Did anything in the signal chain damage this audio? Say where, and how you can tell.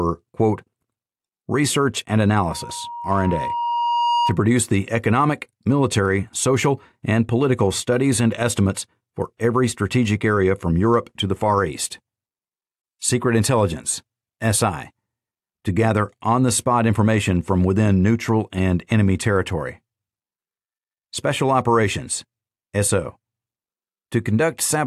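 Yes: loudspeaker feedback squeal in the acoustic and analogue loop. From 2.43 to 4.38 s, a 948 Hz tone swells over roughly a second and a half to about signal level. The microphone was re-amplifying its own loudspeaker.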